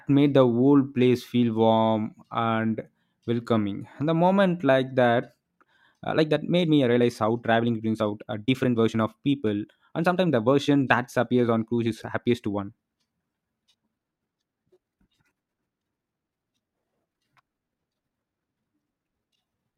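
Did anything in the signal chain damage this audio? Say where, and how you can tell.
Yes. From 5.23 s, right after "the moment like", to the end of the clip, the speech runs about 1.42 times faster while its pitch stays put, so it sounds rushed. This is a time-stretched section, likely from software squeezing the audio to fit a length by dropping short slices rather than resampling. On a spectrogram, harmonic spacing stays unchanged while syllables crowd together; the waveform shows compressed envelopes with small seams where slices were cut.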